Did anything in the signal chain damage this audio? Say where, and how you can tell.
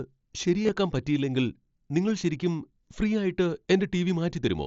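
Yes: concealed Bluetooth headset packet loss on the headset-to-phone link. Between 0.64 and 0.69 s, lost stretches totalling 37.5 ms (longest 22.5 ms) are patched with repeated waveform, heard as a brief buzzy hold and then a warble. A single loss at 3.64 s is nearly hidden. Unlike a dropout, nothing falls silent.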